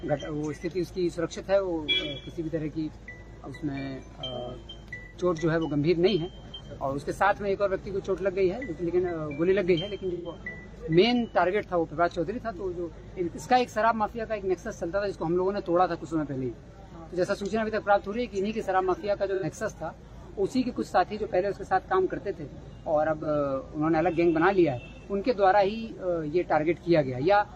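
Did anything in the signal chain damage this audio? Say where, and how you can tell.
Yes, at the codec and network stage. There is AAC frame loss with concealment at four points: 5.04 s, 10.13 s, 19.34 s and 23.22 s. Each lasts roughly 85, 130, 85 and 45 ms. At each point the sound briefly turns smeared and noisy, with a phasey blur, and then snaps back. The durations step in multiples of about 43 ms, which fits whole codec frames going missing. The decoder patched each gap from the last good spectrum, so the sound never drops out.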